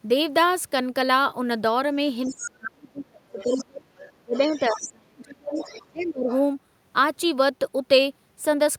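From 2.25 to 2.51 s a second, fainter voice leaks in under the speech, about 15 dB down. It is the other side's voice leaking through, likely loudspeaker echo the canceller failed to remove. It returns at 3.39–3.64 s (about 10 dB down), 3.96–4.88 s and 5.54–6.42 s. Unlike reverberation, this is a separate talker rather than a smear of the main voice.

Across 2.27–5.59 s the talker's own voice sinks by as much as about 35 dB, for roughly three seconds in all. At 5.9–6.3 s it dips again, by about 25 dB. This is speech suppressed in double talk, likely the canceller turning everything down while both sides spoke. The drops coincide with the leaked voice, which separates them from ordinary packet dropouts.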